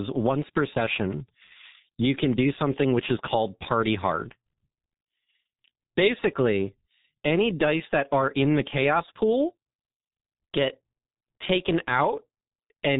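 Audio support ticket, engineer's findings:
G.723.1 codec artefacts across the whole speech clip. Muffled, hoarse, consonants smeared. Top end gone above roughly 3.8 kHz. Heavy damage, fits a 6.3 kbit/s rate: long 30 ms frames, voice model lagging behind fast changes. Probably a legacy VoIP leg in the path.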